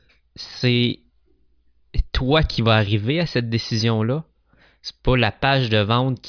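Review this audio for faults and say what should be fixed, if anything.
Nothing here needs fixing, since no technical faults turn up anywhere in this speech recording.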